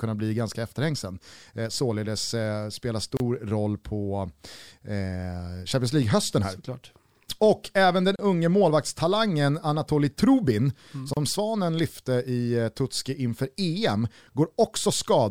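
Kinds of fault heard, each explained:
Gap at a join of encoded pieces: the speech drops out for about 30 ms three times, after "således spela", after "även den", and near 11.1 s, then resumes right where it stopped, which points to separately encoded pieces spliced with their start delay and end padding left in.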